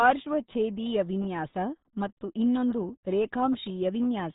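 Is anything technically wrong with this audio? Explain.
Yes. The whole clip has been through the RealAudio 14.4 codec, so the speech carries heavy codec damage from start to finish. It's the old dial-up speech codec: it models the voice crudely and squeezes it into a tiny data stream, and the sound here fits a bitrate of about 8 kbit/s. Nothing gets through above roughly 3.8 kHz, so the speech comes across muffled and boxy, with that gargly, watery texture where the codec can't keep up.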